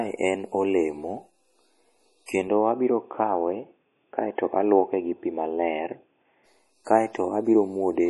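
MP3 compression, throughout: nothing above 11.5 kHz, and heavy watery, swirling artefacts as weak frequency lines drop in and out, which fits a 32 kbps encode as the likely cause. Input switched to a poorer device, 2.48 to 6.46 s: the band narrows to nothing above 3.5 kHz and the speech turns dull, with no gap at the switch, the level roughly unchanged and new noise far below the signal. This likely comes from a change to a narrower-band microphone or headset profile.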